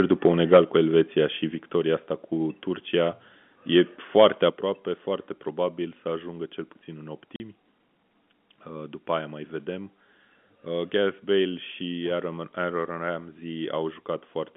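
Speech clip with microphone overload from 0.12 to 0.6 s, about 8 dB over full scale, and again from 4.18 to 4.27 s, about 4 dB over, with a small share of samples clipped. The waveform shows flat-topped peaks and the spectrogram shows broadband crackle, likely from input gain set too high. The microphone volume is stepped down abruptly at 0.57 s by about 4 dB, at 1.56 s by about 4 dB just before "asta cu", and at 4.5 s by about 7 dB just before "foarte probabil să ajungă". Each step shows as a sudden drop in the waveform envelope, with voice and background falling together, likely automatic gain control reacting to a microphone that was too loud. Packet loss filled with silence leaves a 40 ms hole from 7.36 to 7.4 s right after "ajungă cel puțin în", which fits two 20 ms packets. It appears as a hard-edged blank gap across all frequencies in the spectrogram. The G.711 telephone band limits the sound to roughly 150 Hz to 3.5 kHz.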